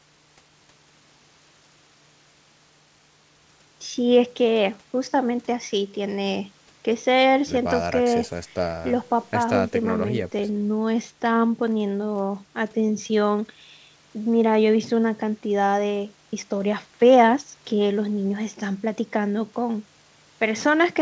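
There are no technical faults to describe at any point in the clip.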